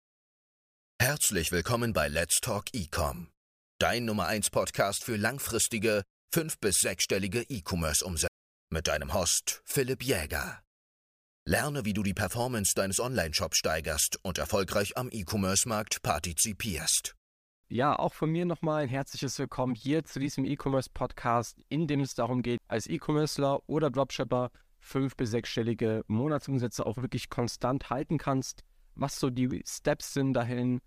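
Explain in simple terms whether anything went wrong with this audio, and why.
Two CD skips interrupt the speech, at 8.28 to 8.31 s and again at 22.58 s. Each time the player goes silent for a split second, about 30 ms the first time and even less the second. A bump or a flaw on the disc made the laser jump to another turn of the spiral, so the speech picks up from a different point instead of carrying on where it stopped.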